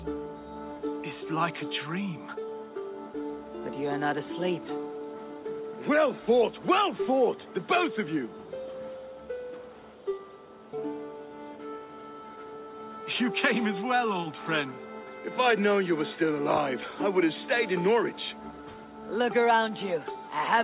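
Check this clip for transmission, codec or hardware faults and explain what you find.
Nothing here needs fixing: the audio came through a call path whose codec and jitter buffer did their normal job, and the missing content above 4 kHz is simply the narrow band that a G.711 mu-law style link carries.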